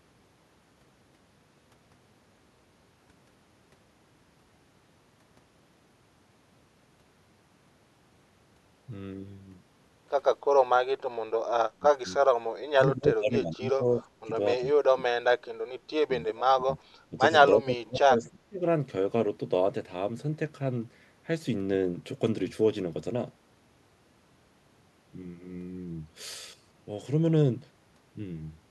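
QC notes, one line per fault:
11.67–12.48 s, 12.75–14.30 s, 14.59–14.75 s, 14.92–15.30 s, 16.07–16.78 s, 17.09–17.19 s, 17.53–18.62 s: speech suppressed in double talk. The speech ducks repeatedly, by about 15 to 35 dB, deepest near 14.92 s. This is likely an echo canceller treating overlapping far-end talk as echo and attenuating everything.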